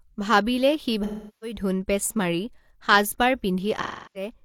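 At 1.03 s to 1.57 s and again at 3.82 s to 4.33 s the speech shows AAC frame loss with concealment: gaps of about 384 ms and 341 ms, which fits roughly nine and eight lost frames. The decoder repeats the last good spectrum with scrambled phase, so the sound turns smeared and noisy, decays toward silence, then fades back in. A plain dropout would cut hard to silence with clicks at the edges instead.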